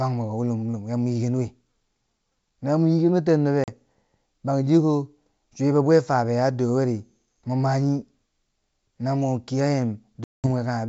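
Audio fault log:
3.64–3.69 s and 10.24–10.47 s: packet loss on an ADPCM call. The G.722 wideband speech drops into hard-edged silence, about 40 ms (a couple of packets) and then about 200 ms (roughly ten). The receiving decoder's adaptive predictor and step size lose track of the sender's, so the sound resumes slightly distorted, settling within tens of milliseconds. On a waveform these are flat-line gaps with abrupt edges; a spectrogram shows blank vertical bands.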